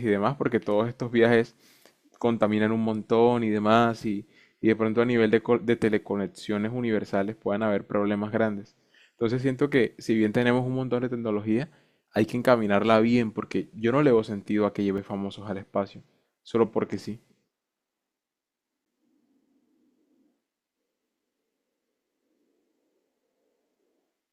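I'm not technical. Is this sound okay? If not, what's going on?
No. The speech has two brief dropouts, each a block of digital silence: at 14.98 s the sound vanishes for 5 milliseconds, and at 18.85 s for 10 milliseconds. In each case a short run of the recording was replaced with silence. The sound switches off and back on with no fade, so each gap is heard as a small tick or click rather than a pause.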